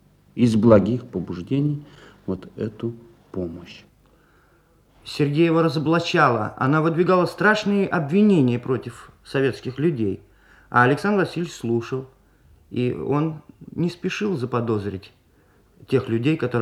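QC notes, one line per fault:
No faults detected on listening through the clip.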